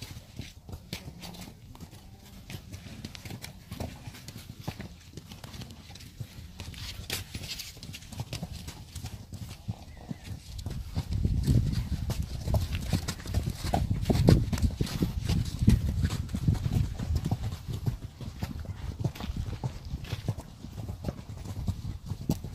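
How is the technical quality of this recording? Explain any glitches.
Nothing stood out on listening; no glitches were heard anywhere in the recording.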